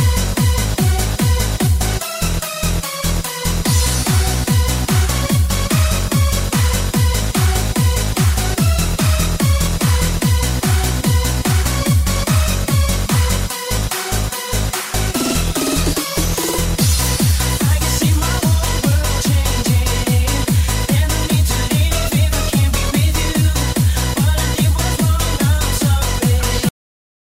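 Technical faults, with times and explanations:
26.69 to 27.30 s, cut-off end: the sound stops abruptly at 26.69 s mid-event and falls straight to digital silence with no natural decay. The final buffers were never written out, so playback ends at the missing data rather than fading.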